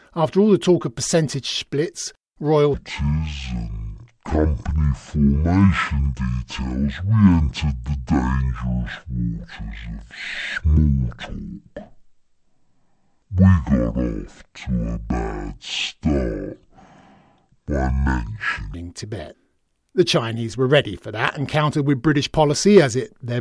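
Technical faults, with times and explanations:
2.74 to 18.74 s, wrong sample rate: the audio plays at half speed and an octave (12 semitones) lower, so the speech turns slow, deep and drawn out. The pitch ratio fits material recorded near 44.1 kHz being clocked out at about 22 kHz with no conversion. On a spectrogram the harmonics and formants sit at half their normal frequencies, packed closer together, with the upper band empty. The waveform looks stretched sideways, each cycle twice as long.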